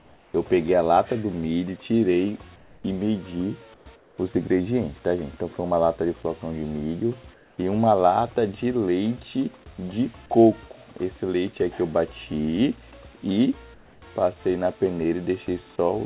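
Discontinuous transmission likely cut the sender off during pauses, so comfort noise in place of the background fills 0.00–0.34, 2.56–2.84, 3.74–3.86, 3.96–4.18, 7.34–7.58 and 13.74–14.02 s. The real background becomes a flat, featureless hiss about 3 to 7 dB quieter, band-limited like the rest of the call to nothing above 4 kHz.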